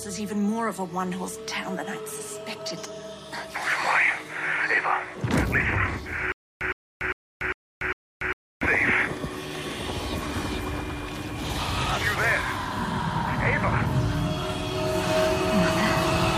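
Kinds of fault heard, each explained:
Stutter with silent gaps: a 0.11 s burst repeats five times every 0.40 s with digital silence between, likely a stalled stream replaying its last fragment.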